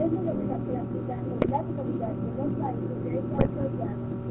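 Speech heard through the GSM full-rate codec carries a plainly audible buzzy, gravelly roughness, because the vocal tract is modelled and excited by sparse regular pulses at a rate that points to 13 kbps. On a spectrogram the energy stops sharply at 4 kHz, with coarse harmonic striping below. GSM bit errors break the sound into squawks and gargling from 1.42 to 1.51 s and from 3.35 to 3.50 s, where corrupted filter, pitch or gain values distort frames, showing as smeared spectral blotches and sudden waveform level jumps.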